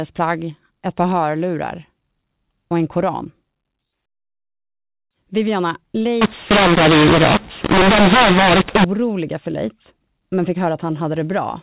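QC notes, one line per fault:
6.21 to 8.84 s, mu-law and A-law mixed up: A-law telephone samples are decoded as mu-law, scrambling the logarithmic levels so speech turns harsh and noise fills the pauses. Unlike clipping, which only flattens peaks, the quietest samples are lifted well above silence.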